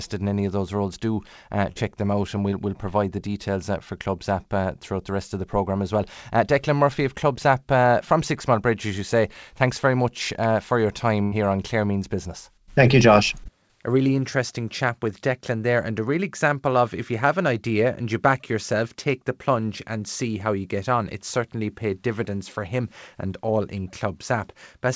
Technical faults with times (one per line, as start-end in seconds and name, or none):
1.72-1.77 short concealed packet loss
11.23-11.34 burst of packet loss
13.44-13.47 short concealed packet loss